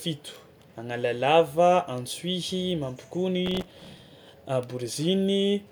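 Speech, with processor overload crackle from 3.46 to 4.01 s: the processor misses many buffer deadlines again and again. Each missed buffer, very short at around 1.5 ms, replays old audio and leaves a hard-edged gritty tearing.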